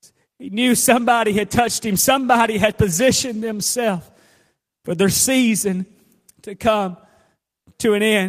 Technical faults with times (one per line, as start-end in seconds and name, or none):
0.91-3.75 call bitrate drop